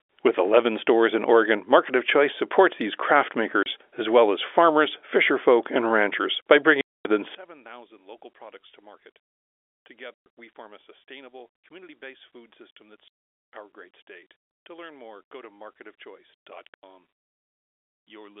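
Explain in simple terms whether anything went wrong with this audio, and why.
The speech drops out into silence five times. This is packet loss filled with silence: chunks of sound never arrived, and silence replaced them. The gaps come at 3.63 to 3.66 s, between "supports these craft" and "as well as farmers", at 6.81 to 7.05 s, just after "fisherfolk and ranchers by", at 10.14 to 10.26 s, at 13.08 to 13.46 s, and at 16.74 to 16.83 s. Each gap is a whole multiple of 30 ms, which fits 30 ms packets.

From 7.35 s to the end, the voice becomes much quieter when played in mono. The likely cause is one channel inverted, so the matching halves cancel each other out. The narrow telephone sound of the G.711 telephone coding can be heard throughout.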